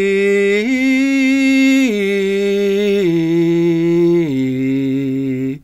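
No technical faults can be heard anywhere in the music.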